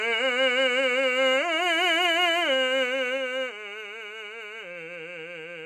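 From 2.38 s to 3.89 s the music drops in level with zipper noise: the gain falls in coarse 2 dB steps, about three a second, rather than sliding smoothly, for a total cut of roughly 10 dB. Each unsmoothed step is an instant jump in the waveform, so it leaves a small click, and the clicks together form a ticking that rides on the music while the level moves.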